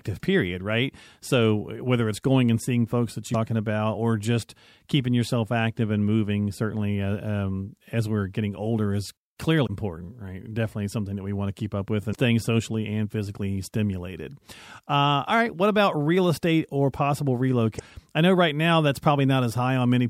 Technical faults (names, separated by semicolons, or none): damaged data in a compressed stream